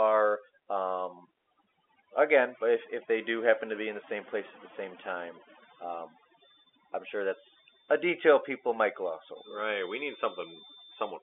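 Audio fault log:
Throughout: overdone noise removal. The noise reducer is pushed too hard, pulling individual frequency bands down whenever they sit near its noise estimate, so the gaps fall to near silence with twinkling specks and the quieter parts of the speech vanish with them.
5.41 to 11.23 s: feedback whistle. Right after "at the same time", a thin steady tone at 3.6 kHz appears, roughly 20 dB under the speech and swelling and fading slowly in level, likely from a loudspeaker-to-microphone loop held just short of runaway, ringing at the top of the telephone band.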